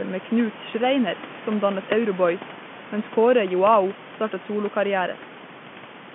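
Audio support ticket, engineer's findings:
No faults found in this clip.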